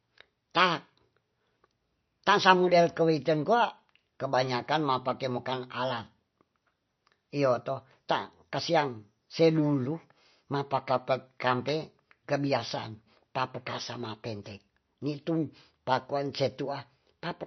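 Throughout, the speech stops at 6 kHz and swirls, chirping on s sounds. This is likely MP3 compression near 32 kbps, whose warble plain low-pass filtering lacks.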